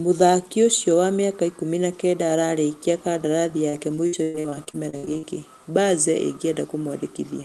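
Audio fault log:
3.69–5.25 s, repeated packet loss (robotic sound): choppy speech with pieces missing as repeated holes up to 113 ms are patched by stretching the preceding sound, filling about a third of this span.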